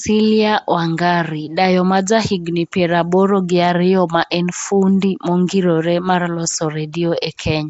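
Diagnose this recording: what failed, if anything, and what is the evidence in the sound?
Throughout, the speech carries a rough, hissy halo with a smeared, underwater colour, and nothing is present above 7.7 kHz. This is a codec-stage fault, likely Nellymoser compression, which fits a 32 kbps Flash-era stream: coarse fixed-rate coding starves weak bands and fills them with noise.

A brief hiss creeps in just ahead of sharp attacks at 6.93 s and 7.21 s, lasting about 14 ms and 11 ms, and the attacks themselves sound softened. This is pre-echo from the same codec: quantisation noise sized for each loud onset spreads back across the quiet start of its block.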